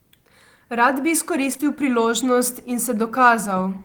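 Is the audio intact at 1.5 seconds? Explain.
No. Short concealed packet loss strikes twice in a row, from 1.53 to 1.57 s and from 1.57 to 1.61 s, each losing 20 ms that the decoder filled by extending the preceding sound, heard as a brief smear.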